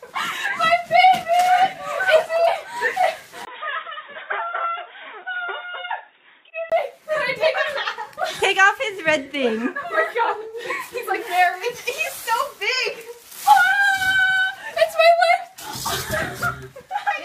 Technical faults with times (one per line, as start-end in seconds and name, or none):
3.45-6.72 input switched to a poorer device